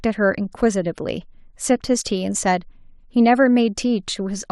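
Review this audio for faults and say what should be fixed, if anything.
MP2 compression, likely at a bitrate fitting about 80 kbps, starves upper sub-bands throughout, leaving the speech dull, with plainly audible gurgling, granular distortion. Prevent it by encoding at a substantially higher bitrate or using a more efficient codec.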